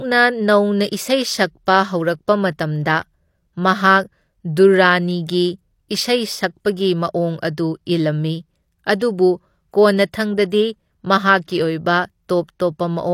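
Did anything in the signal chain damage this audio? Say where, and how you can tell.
Yes, at the codec stage: a pre-echo at about 8.99 to 9.01 s. A short hiss arrives roughly 23 ms ahead of a sharp onset in the speech, and the attack itself sounds softened rather than crisp. That points to a transform codec. Its quantisation noise is spread across the whole block, so noise sized for the loud transient also fills the quiet stretch just before it, leaking ahead of the attack.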